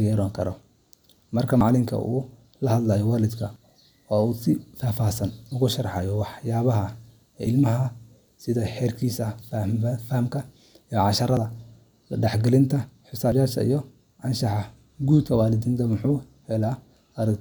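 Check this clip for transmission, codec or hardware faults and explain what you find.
One fault is present: audio missing between chunks, occurring seven times. The likely cause is a recorder or processor handling the audio in 2-second blocks and dropping a brief slice at each handover, then butting the two sides together with no gap. Each loss is roughly 50 ms. The skips fall at 1.61, 3.56 (just after "uu la hadlo waalidka"), 5.51, 9.42, 11.37, 13.32 and 15.27 s. Each is heard as a sudden jump forward in the speech.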